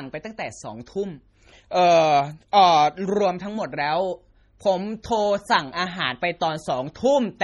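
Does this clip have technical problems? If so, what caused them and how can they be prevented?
Yes. Throughout the speech the sound is watery and swirly, with chirpy s sounds and blurred consonant onsets, likely from heavy MP3 compression at a bitrate around 32 kbps. The encoder starved for bits drops weak frequency lines frame by frame and removes everything above 13 kHz. A spectrogram shows a flat ceiling at 13 kHz and flickering holes below it. To prevent this, record or export uncompressed, or encode MP3 at a much higher bitrate.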